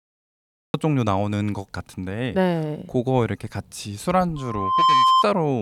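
A speech clip with two faults. It has a cut-off start: digital silence runs until 0.74 s, then the speech begins abruptly in the middle of a sound. There is no natural attack or fade-in. Capture or streaming evidently started late.

From 4.36 s to 5.25 s there is loudspeaker feedback squeal. A steady 1 kHz tone swells over about half a second, rising a few decibels above the speech. The microphone is re-amplifying its own loudspeaker, and at that frequency the loop gain exceeds one.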